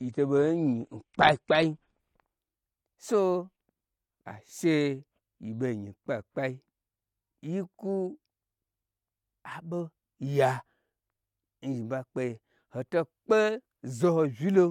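From 0.0 to 2.0 s the speech plays as an adaptive stream starting at a low bitrate. The player began on a lean encoding, which fits AAC at 32 kbit/s. Nothing is heard above 9.8 kHz. Codec artefacts are stronger. At 2.0 s quality jumps, with no gap, to a richer encoding near 96 kbit/s.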